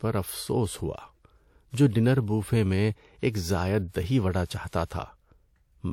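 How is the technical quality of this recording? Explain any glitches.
The recording has three short pre-echo events, all in the second half of the clip. They start at about 3.89, 4.68 and 4.85 s, and each runs for roughly 55 ms before a sharp onset in the speech. The codec packs its quantisation noise across a whole transform block, so when an attack lands late in the block, that noise also smears into the quiet stretch before it. You hear a brief hiss just ahead of each attack, which then sounds soft or smeared.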